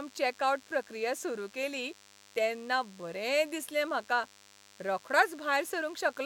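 From start to finish, a DECT cordless phone buzz sits about 30 dB under the speech: a nearby handset or base emits radio bursts every 10 ms, which the audio circuitry rectifies into a thin, harmonic-rich 100 Hz rasp, edgier and buzzier than smooth 50 or 60 Hz mains hum.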